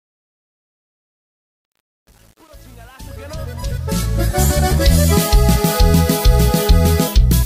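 From 0.0 to 4.43 s, the fade-in shows truncation distortion, gritty until 3.75 s. Undithered rounding leaves coarse steps, consistent with 8-bit resolution.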